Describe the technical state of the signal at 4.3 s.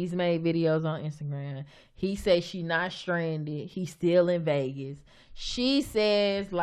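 At 4.3 s the signal is intact, with no dropout, clipping, glitch or other technical fault.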